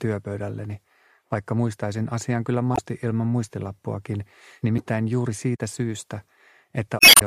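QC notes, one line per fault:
2.73 to 2.79 s, damaged data in a compressed stream: a short stretch of the encoded audio is corrupt, so the decoder misreads those frames and loses sync until it finds the next good header.
4.76 to 4.80 s, damaged data in a compressed stream: same thing again, a brief break where bad frames get dropped or garbled.
6.98 to 7.22 s, damaged data in a compressed stream: the longest hit, about a quarter second, as the decoder hunts for sync before the end.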